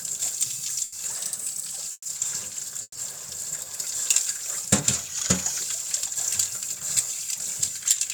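At 0.84 s the sound hangs for about 80 ms, a held, faintly buzzing smear that ends at 0.94 s before carrying on with nothing lost. This is a short stall from a late packet: the jitter buffer ran dry and the receiver stretched the last sound until the packet arrived.

From 1.11 to 1.78 s the everyday sounds run about 6.2% fast and sit roughly a semitone sharp, about 105 cents, before snapping back. That is likely a drift correction step, where clock-matching software briefly raised the playback rate to drain its buffer.

At 1.92 to 2.07 s and again at 2.82 to 2.97 s the audio freezes into a fading buzz, with about 40 ms of silence, then resumes where it left off. Each is a call audio freeze lasting about 130 ms, likely from delayed packets emptying the jitter buffer.

From 4.95 to 5.61 s the opposite drift correction step is heard: playback runs about 6.2% slow and drops about 111 cents, likely as the software slowed the rate to refill its buffer.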